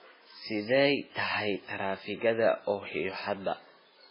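From start to finish the speech sounds watery and swirly, with nothing above about 5.3 kHz, so sibilants lose their edge and chirp metallically while consonant attacks smear. This is heavy damage that is likely from MP3 compression at a very low bitrate, one that fits roughly 16 kbps. Starved of bits, the encoder cut the treble at that fixed point and zeroed weaker frequency lines, which flicker on and off between frames.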